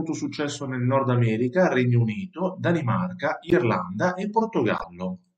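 At 3.50–3.53 s and 4.78–4.84 s, a corrupt frame decoded from damaged data spills misplaced energy into a brief chirp, squeak, blip or burst of noise, peaking near -5 then -15 dBFS, seen as bright vertical smears and waveform spikes.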